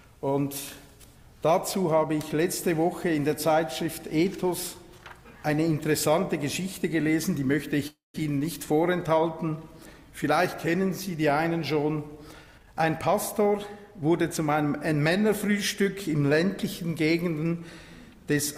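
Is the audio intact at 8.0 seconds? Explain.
No, a call audio freeze runs from 7.87 to 8.16 s. Likely stalled packets emptied the jitter buffer, so the last sound decays into about 160 ms of silence, then resumes intact, 0.27 s late.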